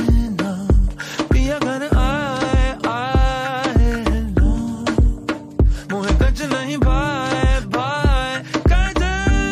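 No technical faults are audible.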